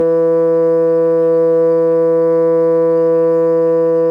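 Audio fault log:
No faults heard anywhere in the music.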